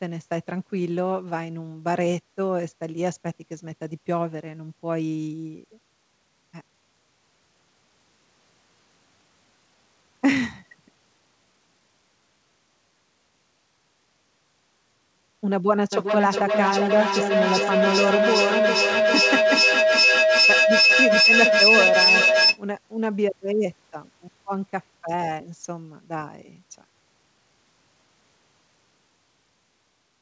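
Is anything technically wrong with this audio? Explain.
Yes. From 15.92 to 22.63 s the speech develops a feedback howl. A microphone and loudspeaker in the same room form a loop whose gain exceeds unity, so each pass builds a tone near 3 kHz that pulses roughly every 0.4 s and peaks about 6 dB above the speech.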